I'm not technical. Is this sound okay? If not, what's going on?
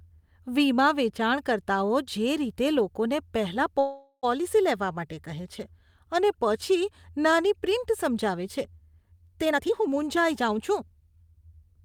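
No. At 3.79 s, just after "રીતે લોકોને પહેલા", there is a call audio freeze. The sound stretches into a fading buzz until 4.25 s, likely from delayed network packets. Then the speech resumes with nothing lost.

From 9.45 to 11.33 s there is a jitter buffer speed-up. The speech plays about 24% faster at the same pitch, as the receiver trims around half a second to catch up.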